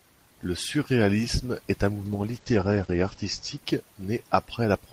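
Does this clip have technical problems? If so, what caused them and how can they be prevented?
Yes. A call bitrate drop starts at 2.06 s, right after "surréalisme est un". The bandwidth estimate fell, so the encoder coded far more coarsely and cut the top end from 20 kHz to 8 kHz. The speech turns muffled and rough until 3.63 s, which points to a fall from about 32 to 15 kbps, held at its lowest for about 1.1 s. To prevent it, keep spare network headroom and prioritise audio traffic so the bandwidth estimate stays steady.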